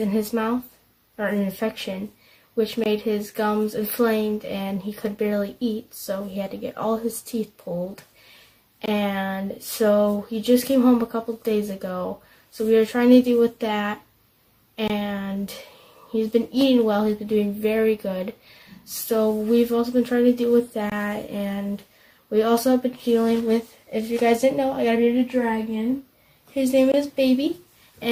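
Audio delivered in 6-second chunks has 20 ms of silence inserted at each join, a gap between chunks that leaves short holes at 2.84, 8.86, 14.88, 20.90 and 26.92 s.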